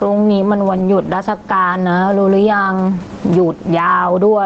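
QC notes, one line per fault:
Throughout, gain pumping: the speech sounds squashed, with loud and soft parts pressed close in level and a swing of roughly 15 dB. The likely cause is microphone gain set far too high, with a fast limiter or compressor clamping down on each loud sound and letting go in the gaps; room noise sits about 35 dB below the speech.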